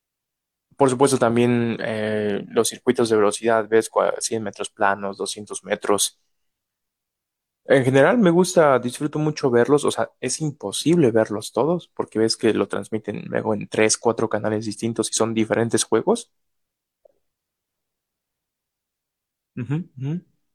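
Nothing in this speech recording stands out as a technical fault at any point, so there's nothing here to flag.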